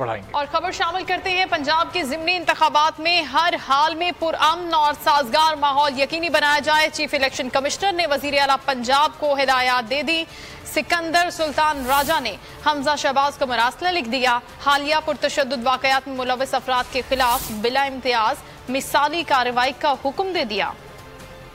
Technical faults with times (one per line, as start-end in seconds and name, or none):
none